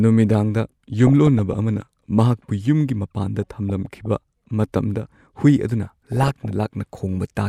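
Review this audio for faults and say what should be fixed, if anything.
DAB burbling affects the speech at 1.07–1.56 s, 3.43–4.06 s and 5.83–6.51 s. Bit errors get past the error correction. Single sub-bands get short blips of noise and can jump in level for up to a frame. Improving reception to cut errors prevents it.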